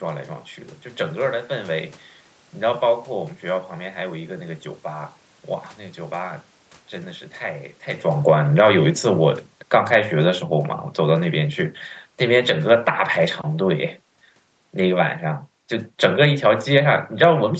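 From 8.12 s to 17.41 s the automatic gain control is falling: it judged the input too loud or its background noise too strong and eased its gain down by about 11 dB. The speech and the room noise behind it sink together, right as the talker shifts position around 8 s.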